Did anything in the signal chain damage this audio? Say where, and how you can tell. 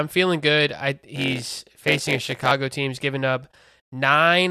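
Yes. A block size mismatch (padded) in the driver or buffer stage damages the audio from 1.15 s to 2.52 s, between "feeling good I" and "team's giving up". Each block written comes up short of what the next stage reads, and zeros fill the remainder. That adds a buzz at 91.9 Hz and slows the speech to 0.919 of its speed with timbre unchanged. The waveform shows evenly spaced flat gaps, and the spectrogram shows regular vertical stripes with a comb of 91.9 Hz harmonics.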